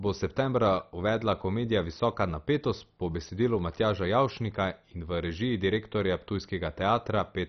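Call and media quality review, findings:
Speech sounds dull and gurgly throughout, with granular grit and nothing above about 6.1 kHz. Upper sub-bands keep flickering in and out. Likely MP2 compression, heavily starved of bits, which fits a rate around 32 kbps. Layer II drops whole top bands and coarsely quantises what's left.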